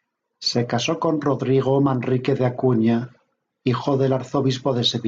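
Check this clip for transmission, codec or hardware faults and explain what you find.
Nothing faulty is audible anywhere in this speech recording.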